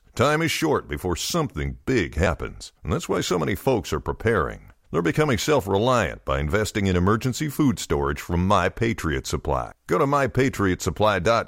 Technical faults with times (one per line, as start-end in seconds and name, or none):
2.25 damaged data in a compressed stream
9.71 damaged data in a compressed stream